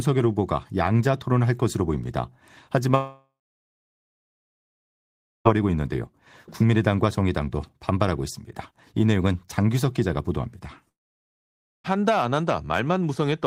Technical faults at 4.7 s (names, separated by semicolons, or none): long network dropout